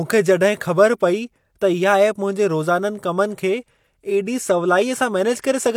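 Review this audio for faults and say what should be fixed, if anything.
No faults are audible in this speech recording. Nothing needs to be fixed.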